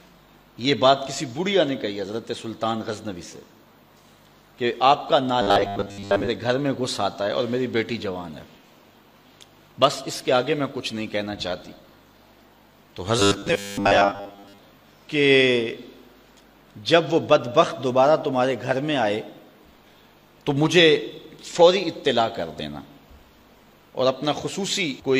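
Robotic sound from repeated short buffers appears from 5.42 to 6.28 s and again from 13.19 to 14.58 s. Both times the audio turns into a rigid, metallic buzz fixed at 100 Hz, which fits a 10 ms segment being looped. The likely cause is audio data arriving too slowly, so playback keeps repeating the last short buffer while most of the real material, roughly two thirds or more, is skipped.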